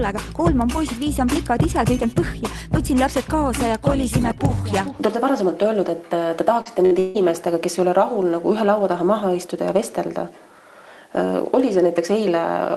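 A brief smear runs from 6.61 to 6.68 s, where the sound wobbles and loses its definition for a moment. This is short concealed packet loss: about 40 ms of audio never arrived in time, so the receiver extended the preceding sound for about 41 ms and then blended back into real signal.

Inside that smear, from 6.65 to 6.67 s, a 20 ms stretch turns rougher and grainier. That is a lost packet rebuilt from error correction. The following packet carried a low-bitrate backup copy, and the Opus decoder played that coarser version instead of leaving a hole. The same rough 20 ms patch returns at 6.91 to 6.93 s, and again at 7.15 to 7.17 s.

From 6.85 to 6.94 s the sound turns into a held, fading continuation and then picks up slightly further along. This is a burst of packet loss: about 40 ms went missing across consecutive packets, and the receiver stretched the last sound over about 54 ms, turning it down as the gap went on, so that stretch of audio is simply absent.

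Right after, from 6.99 to 7.18 s, a longer held tail of the previous sound fades across roughly 158 ms without ever dropping to silence, and the audio resumes past a missing stretch of about 160 ms. The likely cause is a long network dropout, with the receiver covering the gap by continuing and fading the last sound. Throughout, the Opus path at 32 kbps keeps its top end below about 12 kHz.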